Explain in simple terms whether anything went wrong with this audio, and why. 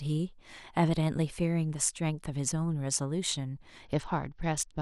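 A Bluetooth SBC bit pool drop hit at 3.85 s and lasted to the end. The wireless link got crowded, so the phone sharply cut the data spent on the sound. The voice turns dull, losing its crisp highs, and picks up a gritty, rough edge.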